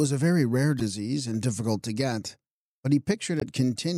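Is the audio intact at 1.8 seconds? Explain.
Yes, the audio is intact at 1.8 seconds, with no dropout, click, distortion or other fault at that moment.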